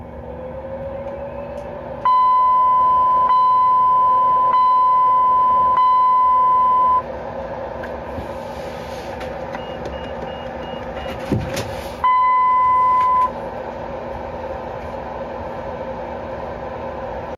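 From start to finish there's gain pumping. The level gets pulled down under each loud sound, swinging by about 10 dB. It's likely the input gain was set far too high and a fast limiter or compressor is clamping it down on every peak. The loud and soft parts sit squashed close together.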